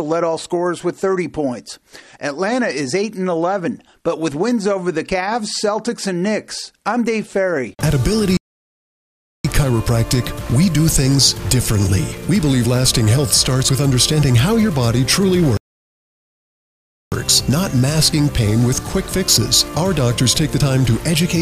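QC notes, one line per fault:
8.37–9.45 s and 15.57–17.12 s, playback stall: the sound cuts off mid-flow and goes silent for about 1.1 s, then for about 1.5 s, before carrying on. This is likely the player running out of buffered data or its thread being blocked.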